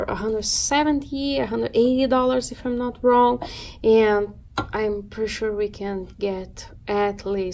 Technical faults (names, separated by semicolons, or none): none